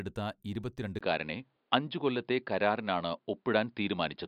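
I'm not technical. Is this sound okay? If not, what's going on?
No. At about 0.99 s the speech suddenly turns duller and boxier and stays that way, with a brief gap at the change. That points to the input likely being switched to a poorer device. Unlike a tone-control tweak, it also shifts loudness and brings new background hiss.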